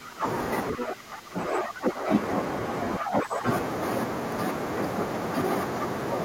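Right from the start, 0.0 to 0.25 s, then 0.76 to 2.11 s and 2.98 to 3.46 s, the speech dips by up to about 15 dB. That's speech suppressed in double talk: the echo canceller likely could not separate this side's voice from the loudspeaker echo during overlapping talk and squashed both.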